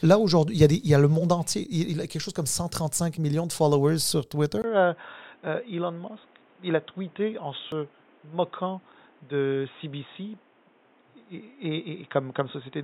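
At 4.62 s the speech drops out for about 20 ms, then comes back duller and boxier through to the end. That's most likely an input switched to a poorer device: the recording seems to have jumped to another mic or a headset call profile. Nothing gets through above about 3.8 kHz, the level sits roughly 5 dB lower, and there's a new background noise of its own, roughly 30 dB under the speech.

Then at 7.72 s there's a tiny skip where the waveform jumps. That's an overlap between stream segments: two chunks' time stamps overlapped, and the player trimmed the overlap even though that stretch wasn't actually doubled, so about 6 ms of real audio just vanishes. The stream here is cut into 6-second segments.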